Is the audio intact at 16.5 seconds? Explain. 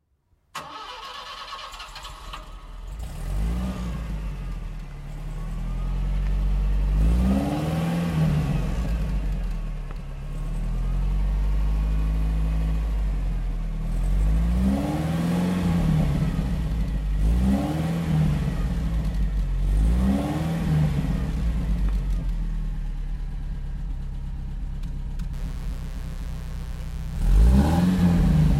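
Yes, the audio is intact at 16.5 seconds, with no dropout, click, distortion or other fault at that point.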